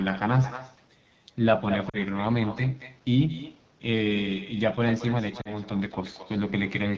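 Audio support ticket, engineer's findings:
Echo with no canceller, throughout: every phrase trails a quieter, thinner copy, about 13 dB down and roughly a fifth of a second late. The far-end loudspeaker leaks into its microphone, and with no echo cancellation, the sound returns over the network round trip.

AMR wideband (HD Voice) codec, throughout: plainly audible rough, raspy texture, which fits the low 8.85 kbit/s AMR-WB mode. At this rate the pulse-driven vocal tract model can't track the speech cleanly, and the band above 6.4 kHz is just shaped noise.

Lost AMR speech frames, 1.89–1.98 s and 5.41–5.54 s: short drops to near silence with a weak, rough recovery, consistent with two failed frames (40 ms) each time. The decoder repeats the last good pitch and vocal tract settings at falling gain until good frames resume.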